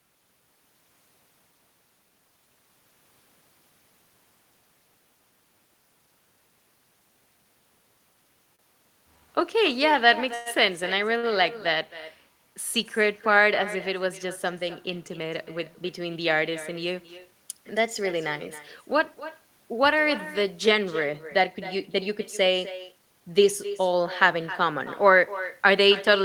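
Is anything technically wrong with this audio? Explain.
Yes, there are several call-transport problems in this speech.

The whole clip has echo with no canceller. The far end's loudspeaker feeds back into its microphone, so every phrase returns after roughly a third of a second, about 15 dB down, as a thin shadow trailing the talker.

There are two short stalls from a late packet, at 8.55 to 8.62 s and 11.18 to 11.29 s. Each time, the jitter buffer ran dry and the receiver stretched the last sound, by 34 ms and then 51 ms, until the packet arrived. You hear a sound held a touch long, with a faint buzz or dip, but nothing is lost.

From 10.34 to 10.49 s there's a call audio freeze. The sound is held for 114 ms as a fading buzz or hiss, with no true silence, and then picks up where it left off. This was likely caused by packets held up in the network until the buffer emptied.

Finally, there are two jitter buffer speed-ups, at 13.90 to 15.18 s (3% fast) and 21.24 to 23.21 s (6% fast). 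After a backlog built up, the receiver trimmed tiny pitch-period slices to cut delay, dropping around 50 ms and around 150 ms of audio. The second, at 6% fast, sounds hurried at the same pitch.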